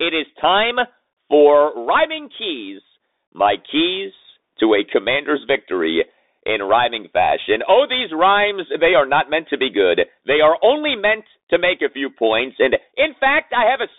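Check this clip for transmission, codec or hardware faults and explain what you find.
One fault runs through the whole clip. Bluetooth CVSD headset codec, throughout: one-bit up/down coding with an adaptive step, fitting a 64 kbps link, confines the speech to roughly 250 Hz to 3.7 kHz, leaving scratchy s sounds, overload distortion on loud highs and a granular hiss.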